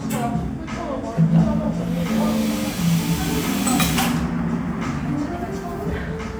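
From 1.27 s to 5.79 s you get sample clock jitter: the converter's clock wobbles by a couple of microseconds, so samples land slightly off time. It comes through as a grainy hiss about 30 dB under the sound, strongest on loud, bright moments and gone in quiet gaps.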